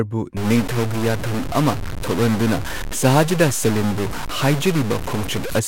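A stuck bit, likely from a broken data line or converter holding one bit fixed, runs through this speech clip from 0.37 to 5.59 s. Samples are pushed off by a step of about -20 dBFS, giving harsh, buzzy distortion and filling the pauses with hiss.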